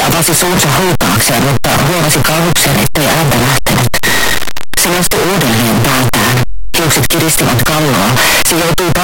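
Throughout the clip, the sound is a very loud, harsh distortion in which quiet passages hit as hard as loud ones, likely from signed and unsigned samples being mixed up in the 8-bit data. Unlike the faint grainy hiss of plain 8-bit audio, this is every zero crossing leaping across the full range.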